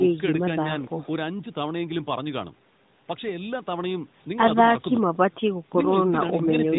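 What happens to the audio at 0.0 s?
Nothing goes wrong at 0.0 s; the speech starts intact, with no fault at that moment.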